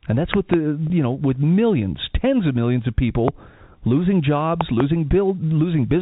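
Loud pops hit this telephone-band speech recording three times: a pair between 0.34 and 0.56 s, a single pop from 3.28 to 3.30 s just after "tens of millions of", and another pair from 4.61 to 4.82 s. Each rises roughly 15 dB above the speech, which continues underneath. The likely cause is a sudden voltage step, such as a switch, plug, static discharge or driver glitch, that the downstream circuitry shaped into a sharp thump. Packet loss with pitch repetition occurs from 0.87 to 0.90 s. About 30 ms of audio went missing, which fits a single dropped packet, and the receiver filled the gap by replaying the last pitch cycle. Because the gap is so short, it is heard as a brief held, slightly buzzy tone rather than a silence, and the speech resumes at once. The narrowband G.711 A-law telephone coding itself adds little or no audible damage.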